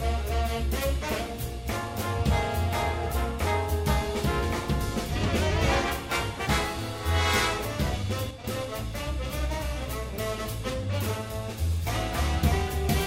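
The audio has a sudden gain jump. At 8.31 s the level drops by about 6 dB in a single step, and it stays down until 8.44 s. Sound and background noise fall together. The likely cause is a gain change applied without a ramp.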